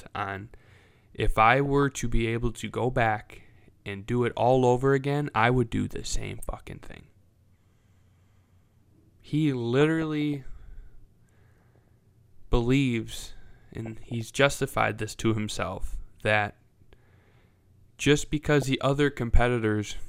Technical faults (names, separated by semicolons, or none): DAB burbling